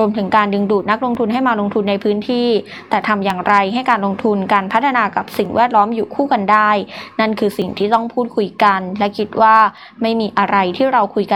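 From 1.15 s to about 9.8 s, regular clicks recur every 2.16 s, roughly five in all. These are clock drift buffer slips, likely from two devices running on clocks about 500 ppm apart, so a block of several dozen samples is periodically dropped or repeated.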